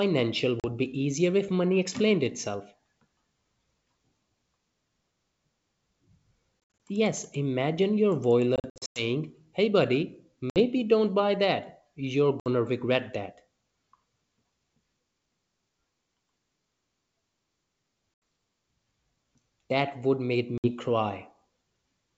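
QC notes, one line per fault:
0.60–0.65, 6.87, 8.56–9.04, 10.50–10.61, 12.40–12.48, 18.14–18.22 and 20.58–20.71 s: packet loss on an ADPCM call. Most are hard-edged silent holes of 40 to 80 ms. At 6.87 s, 120 ms drops out in bursts across 200 ms. At 8.56 s, 260 ms drops out across 400 ms. Speech returns slightly distorted. The decoder's predictor and step size drifted from the sender's, so they need tens of milliseconds to resync.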